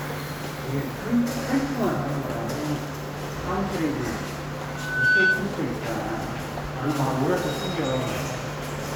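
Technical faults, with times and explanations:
4.68–5.53 s, loudspeaker feedback squeal: a 1.5 kHz tone swells over about 0.4 s to roughly 10 dB above the sound. The microphone is re-amplifying its own loudspeaker.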